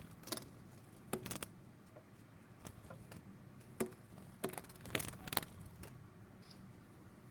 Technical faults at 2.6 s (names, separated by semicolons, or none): none